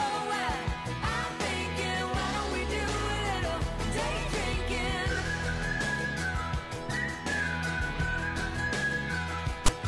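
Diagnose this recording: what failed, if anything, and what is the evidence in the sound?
File tags played as audio, a storage and file-parsing fault. From 9.66 to 9.68 s a short, loud rasp with hard edges appears, offset to one side. A block of text tags near the file's end was decoded as sample data and played back.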